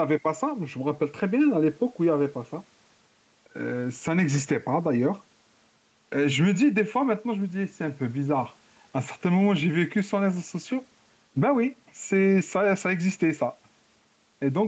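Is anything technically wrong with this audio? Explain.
Yes. There is gain pumping throughout. The gain swings by a few decibels, likely from a fast limiter pulling it down on loud sounds. The waveform shows loud and soft parts closer in level.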